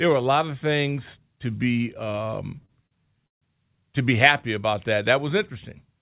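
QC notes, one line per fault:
2.12–3.43 s, repeated stalls (stutter): the speech hiccups six times, dragging and stuttering as short stretches of sound are held and smeared forward, the longest hold about 144 ms and faded, roughly a fifth of this span. Packets reached the jitter buffer late or too slowly, so it kept running dry and the receiver extended the last sound until data resumed. Nothing is lost, only delayed, over a narrowband call path that cuts off above 4 kHz.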